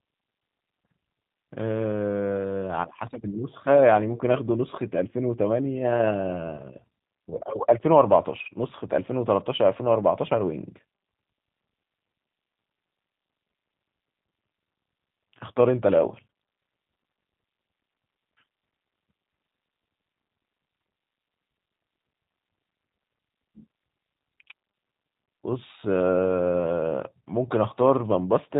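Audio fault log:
throughout G.729 codec: speech rebuilt from filter, pitch predictor and sparse pulses at 8 kbit/s, nothing above 4 kHz, giving a muffled, rough, plainly synthetic quality.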